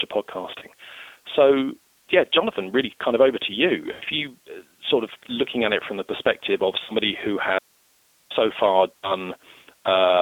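Throughout, the speech carries the sound of the G.729 codec, a low-rate VoIP coder running at 8 kbit/s. It rebuilds each 10 ms frame from a vocal tract filter, a pitch predictor and a few pulses. The band is held to roughly 300 Hz to 3.6 kHz. The damage is plainly audible. The voice sounds rough and slightly synthetic.

Packet loss concealed by the speech codec appears four times: 0.59 to 0.65 s, 3.92 to 4.03 s, 6.83 to 6.92 s, and 8.99 to 9.13 s. The missing stretches are about 30, 90, 60 and 60 ms. That fits one, three, two and two lost packets. In each gap the decoder repeats its last pitch and filter at falling gain. The speech smears into a buzzy tone or coloured noise that fades. It stays weak or distorted briefly after good packets return.

From 7.59 to 8.30 s the speech cuts out abruptly for about 0.72 s. Only hiss remains, about 40 dB below the normal level. It is an audio dropout to a faint residue. 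The sudden edges rule out a natural pause or fade. The likely cause is that the wanted signal was lost while the path after the break stayed live, passing its own noise.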